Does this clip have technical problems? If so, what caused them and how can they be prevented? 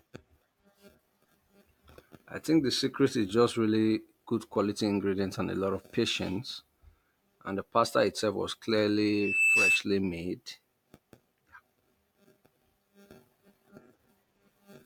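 Yes. Just after "the pasta itself was", from 9.08 to 9.84 s, there is a loudspeaker feedback squeal: a 2.6 kHz tone swells over roughly 0.4 s until it sits a few dB above the speech. The microphone is picking up the loudspeaker it feeds, and at that frequency the round-trip gain exceeds unity, so the tone keeps reinforcing itself. Prevent it by reducing loop gain: keep the loudspeaker out of the microphone's pickup pattern, mic closer at lower gain, and notch the feed near 2.6 kHz.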